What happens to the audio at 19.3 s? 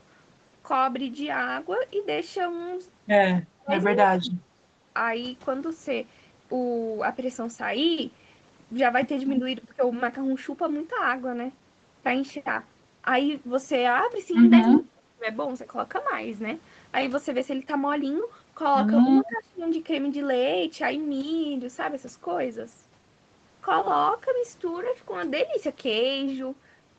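Right around there, from 19.15 to 19.67 s, the speech gets pulled down, dipping by roughly 20 dB at its deepest. That's likely speech suppressed in double talk: with both sides talking at once, the echo canceller couldn't tell the near talker from loudspeaker echo and turned everything down.

Inside that dip, from 19.28 to 19.37 s, there's a short echo leak, a faint copy of the voice arriving 318 ms late and sitting roughly 20 dB under the speech. It's likely loudspeaker pickup that the far end's echo canceller didn't fully remove and sent back.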